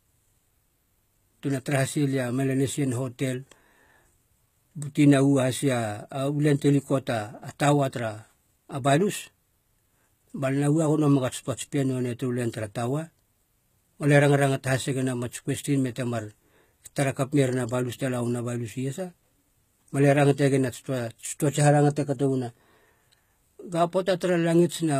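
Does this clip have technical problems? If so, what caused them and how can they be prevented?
Yes. Throughout the speech, the likely cause is HE-AAC compression at a very low bitrate, consistent with about 20 kbps. The encoder keeps only the lower spectrum and synthesises the treble by copying lower bands upward under a coarse envelope, so the highs are not the real ones. The s sounds come out gritty and metallic, and nothing is present above 14.9 kHz. Encoding at a higher bitrate, or with plain AAC, would prevent this.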